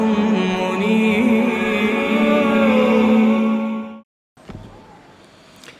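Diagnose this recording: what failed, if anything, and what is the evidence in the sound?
No faults detected in this recording.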